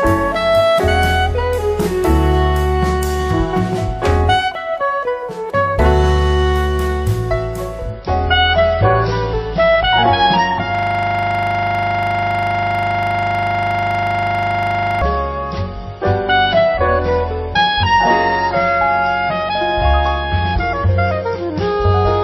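The audio has two faults. From 7.9 s to the end, it falls back to an adaptive stream at a lower bitrate. The change is sudden, with no gap. Nothing survives above 5.8 kHz, so the treble is gone and the top end sounds dull. Codec artefacts rise in the same stretch. The sound points to a drop from about 128 kbit/s MP3 to roughly 24 kbit/s, as the player switched to a cheaper version when the connection slowed. From 10.75 s to 15.02 s, a system hang loop takes over. A 40 ms slice of audio repeats exactly, over a hundred times. At 25 Hz this is a fast stutter on the edge of a buzz. The computer or driver froze, while the sound hardware kept replaying the same short ring buffer. The loop length fits a buffer of about 40 ms.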